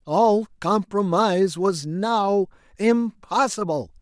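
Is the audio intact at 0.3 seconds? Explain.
Yes, the speech at 0.3 s plays through without any audible dropout, distortion or other fault.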